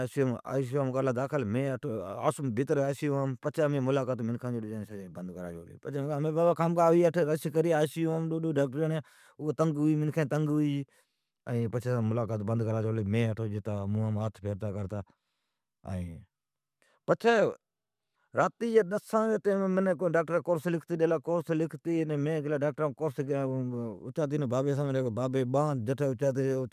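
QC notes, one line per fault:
Nothing to flag on this one, no faults turned up anywhere in the speech.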